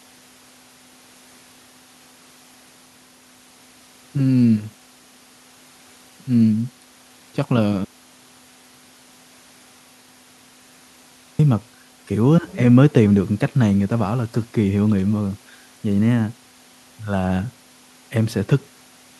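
At 7.85 s the speech cuts out mid-flow and returns at 11.39 s. This is an audio dropout to silence. The gap is silent, with no room tone. About 3.5 s of speech is lost. The input was likely disconnected or muted while recording continued.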